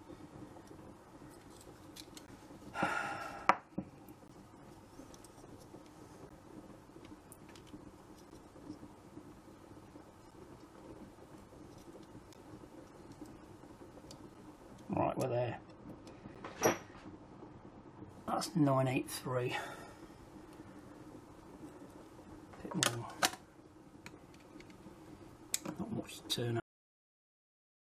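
Gaps between stream segments open at 2.26, 4.28, 6.29, 8.30, 10.31, 12.34 and 14.34 s, every 2 s, as segment timestamps leave a hole the player fills with silence. Each hard-edged dropout lasts 5 to 18 ms, and no audio is lost.

From 15.23 to 18.10 s, de-emphasis is applied wrongly: a treble cut meant to reverse pre-emphasis, used where there was none or applied twice. The response slopes down to about 11 dB lower at 10 kHz than at 1 kHz, so the sound turns dull and muffled. Another segment gap falls inside this span, at 16.35 s.

At 26.60 s the audio stops mid-sound with a cut-off end. The final buffers were never written or played, so it drops straight to digital silence with no decay.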